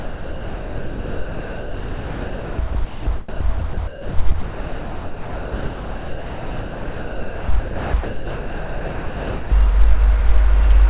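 From 0.0 to 9.51 s the sound is chopped by the voice detector, likely through sender-side gating that switched transmission on and off repeatedly. About 8.2 s was replaced with comfort noise, band-limited to 4 kHz like the rest of the call audio.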